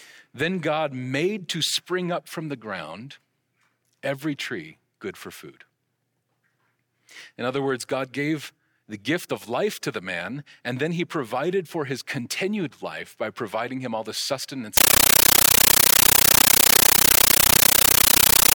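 Speech that, from 14.77 s to the end at 18.55 s, becomes a compressed stream played as audio: loud static bursts, each about 13.3 ms, chattering 31 times a second with silent gaps. That regular rhythm sets it apart from steady noise and fits an undecoded AC-3 bitstream.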